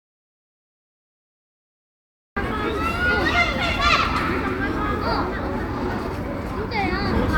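The input signal was most likely lost, from a disconnected device, a failed link or a stray mute, while the recorder kept writing silence. This audio dropout to silence is already under way as the clip begins and lasts until 2.36 s, with no room tone in the gap. The sound then enters abruptly, and whatever occurred earlier is gone.

At 4.05 s, the time stamps of two stream segments overlap, and playback discards the overlapping stretch even though that material was never duplicated. The boundary fits segments about 6 s long. This overlap between stream segments removes roughly 17 ms, so the waveform jumps and a brief click or tiny skip is heard.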